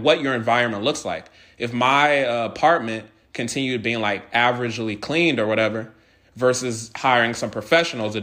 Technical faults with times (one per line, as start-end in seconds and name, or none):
none